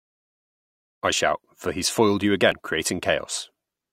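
After the smooth fade in settles at about 1.04 s, damaged data in the compressed stream at 2.52 s makes the decoder lose sync, producing a brief glitch.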